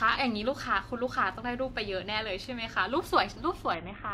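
At 3.74 s the speech shows a Bluetooth SBC bit pool drop that lasts until the clip ends at 4.14 s. The encoder was starved of bits, which fits a fall in bit pool from around 28 to about 5, or roughly 54 kbps. The upper sub-bands receive almost no allocation and the remaining bands are coarsely quantised, so the treble collapses into a dull, muffled tone while a gritty, granular noise rides on the speech.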